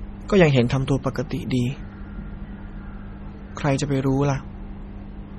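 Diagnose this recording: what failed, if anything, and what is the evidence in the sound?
Likely MP3 compression at the codec stage, throughout: the speech stops at 12.7 kHz and swirls heavily, as a bit-starved encoder near 32 kbps zeroes weak lines.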